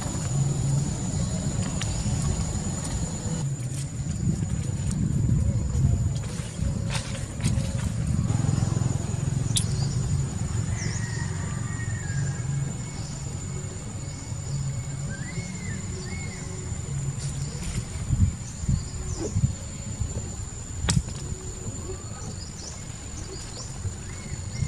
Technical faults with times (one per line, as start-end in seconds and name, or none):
21.86-24.68 time-stretched section